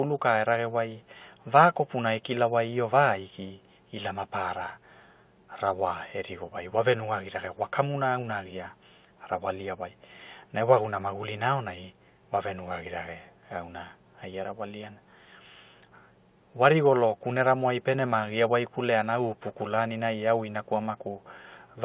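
No technical faults are audible.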